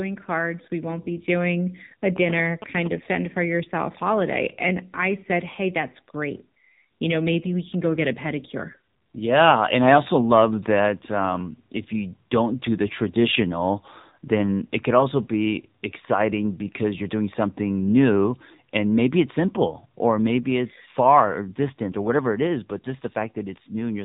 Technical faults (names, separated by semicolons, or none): AMR narrowband mobile codec; GSM signalling bursts